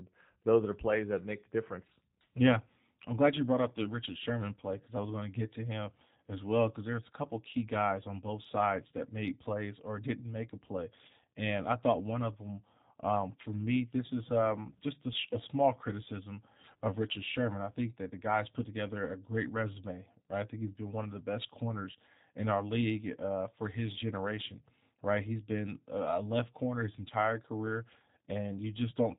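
From start to finish the speech carries G.729 codec damage, and it is plainly audible. The encoder rebuilds the voice from a vocal tract model, a pitch predictor and a few sparse pulses per 10 ms frame, which fits an 8 kbit/s VoIP stream. Everything above 4 kHz is gone, and the voice has a rough, slightly buzzy, synthetic grain. A simple low-pass filter would only dull the sound, with no resynthesised texture.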